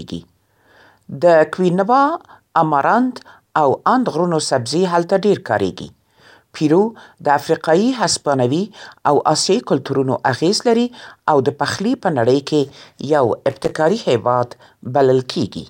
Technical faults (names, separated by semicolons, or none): loose connector crackle